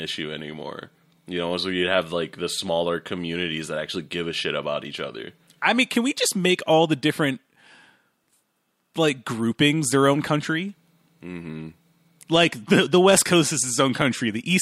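No technical faults can be heard anywhere in the recording.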